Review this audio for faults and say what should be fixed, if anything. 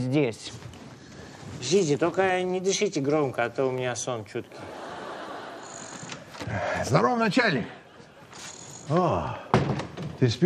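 Periodic USB or driver dropouts: once a second from 2.78 to 6.78 s, the audio path stalls, dropping about a millisecond to silence each time, heard as about five regular ticks. Prevent this by stopping the background task that periodically blocks the USB bus or audio driver.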